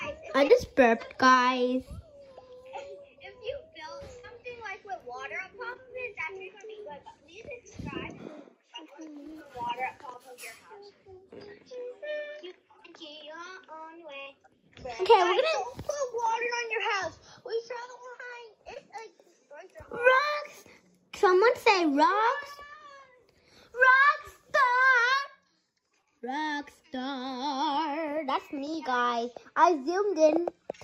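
Six brief smears or wobbles break the flow of the audio, at 0.47–0.51, 4.19–4.25, 5.73–5.77, 14.23–14.28, 18.74–18.78 and 26.02–26.05 s, and a short sound may simply vanish in one of them. This is short concealed packet loss. Each time, 20 or 40 ms of the stream failed to arrive in time, and the receiver papered over the hole by extending the preceding sound for between 10 and 40 ms before blending back into the real audio.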